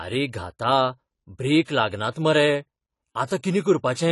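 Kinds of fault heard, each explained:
AAC compression: The speech sounds dull, with nothing above 11.4 kHz, and the coding damage is plainly audible. This likely comes from AAC-LC coding at a low bitrate, fitting about 32 kbps. The encoder lowered its cut-off and quantised the spectrum coarsely to save data.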